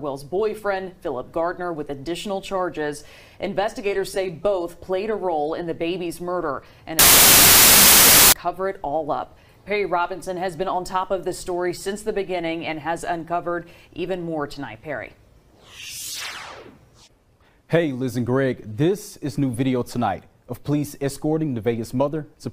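From 6.99 to 8.32 s, loud harsh noise buries the sound, which crawls at half speed and lower pitch: wrong sample width, 32-bit integer data read as 16-bit.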